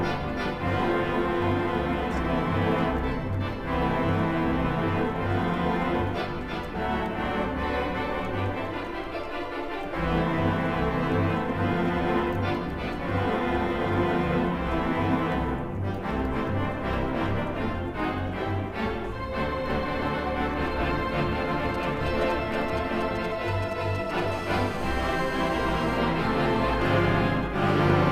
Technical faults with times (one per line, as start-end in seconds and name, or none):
21.74-24.20 GSM signalling bursts
24.32-25.97 GSM phone buzz